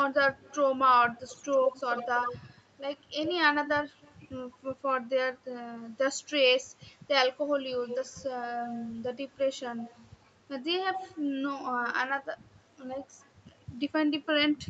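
An echo canceller on a loudspeaker end likely failed to remove all of what its microphone picked up, so an echo leak sends a delayed copy of the speech back about 84 ms behind, from 0.36 to 4.15 s, 7.88 to 8.92 s, 9.59 to 10.06 s and 10.92 to 11.94 s. The copy sits about 10 dB under the speech, and much fainter at 9.59 s, adding a delayed doubling within the 8 kHz call bandwidth.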